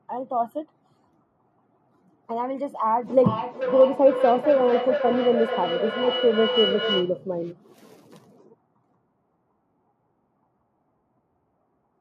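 It's a speech clip, and from 3.1 s to 7.22 s there's a feedback echo between two devices. Each bit of speech comes back around every 400 ms or so, thinner and more ringing, peaking at about 6 dB below the direct speech. That's two devices in the same room on the same call: one plays out what the other's mic sent, that mic picks it up again, and neither echo canceller catches the other device's playback.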